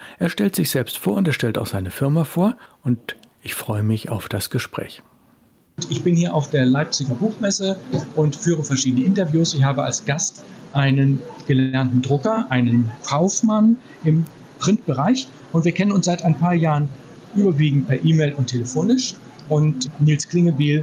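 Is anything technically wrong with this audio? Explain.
Yes, there are three distinct problems.

Gain pumping runs through the whole clip. The input gain sounds set far too high, and a fast compressor or limiter then likely clamps it down on every loud moment. The level dips under each loud sound, a swing of about 5 dB, so levels feel squashed together. On a waveform the envelope looks flattened.

A call audio freeze appears from 11.59 to 11.75 s. The receiver stretches the last sound into a decaying buzz or hiss for about 137 ms, and then the audio resumes exactly where it left off, so nothing is lost but a gap is inserted. This is likely packets stalling in transit until the jitter buffer ran dry. A spectrogram shows smeared, repeated horizontal texture that fades before normal detail returns.

Jitter buffer speed-up occurs at 14.68 to 15.09 s and again at 15.54 to 16.74 s, with playback at about 108% speed and pitch unchanged. 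Having built up excess delay, the receiver trims tiny pitch-period slices over and over, removing around 40 ms in the first stretch and around 100 ms in the second. The sound feels slightly hurried. The waveform looks compressed in time without any spectral shift.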